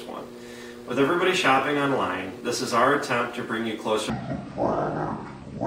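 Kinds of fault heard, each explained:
Section at the wrong speed: from 4.10 s to the end, the sound drops deep and drags at 0.56 times speed, roughly ten semitones low, likely from playback on a mismatched clock.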